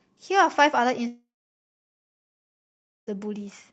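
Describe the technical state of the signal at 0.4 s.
At 0.4 s the speech comes through intact, with nothing beyond the ordinary character of the call path it travelled.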